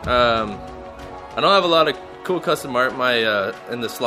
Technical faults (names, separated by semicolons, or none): loose connector crackle